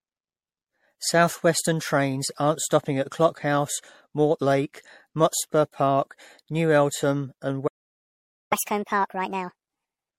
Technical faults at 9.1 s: generation loss; catch-up at higher speed

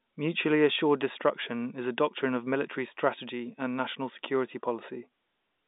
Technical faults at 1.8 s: none

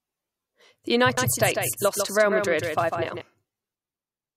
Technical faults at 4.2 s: none

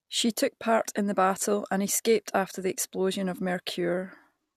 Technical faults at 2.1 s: none

